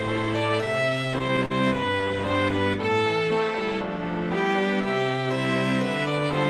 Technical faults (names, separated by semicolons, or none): repeated stalls (stutter)